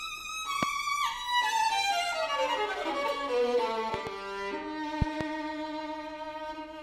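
Loud pops occur at 0.63 to 0.65 s, as a single sharp crack, then as double pops at 3.94 to 4.09 s and 5.02 to 5.23 s. Each jumps well above the surrounding sound, around 15 to 20 dB louder, while the sound carries on beneath. The likely cause is a sudden voltage step, such as a connector, switch, static discharge or driver glitch, that the following circuitry shapes into a brief thump.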